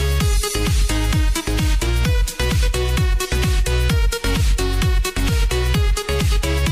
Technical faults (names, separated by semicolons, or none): none